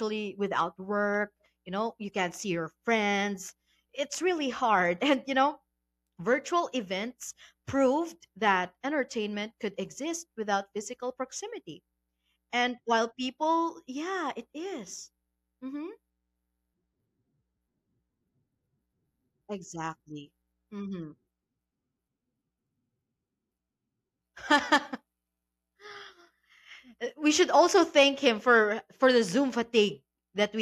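Nothing stood out on listening to this recording.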